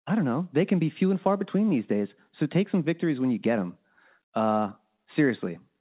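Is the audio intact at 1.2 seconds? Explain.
Yes, at 1.2 seconds the audio is intact, with no dropout, glitch or other fault at that moment.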